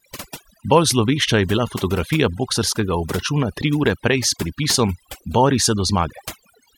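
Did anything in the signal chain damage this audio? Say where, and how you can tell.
Yes, at the call processing stage, where overdone noise removal runs through the whole speech clip. The gaps drop to near silence with twinkling specks, because the suppressor is gating individual frequency bands near its noise estimate, taking quieter speech detail with them.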